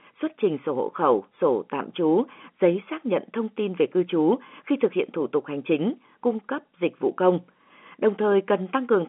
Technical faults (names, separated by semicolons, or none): none